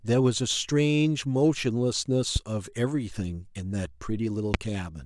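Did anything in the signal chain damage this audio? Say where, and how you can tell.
Yes. Loud pops at 2.36 to 2.38 s and 4.54 to 4.57 s, each a single sharp pulse peaking about 15 dB and about 20 dB above the speech, which continues underneath. A voltage step in the analogue wiring, likely from a connector or static discharge, was added to the signal.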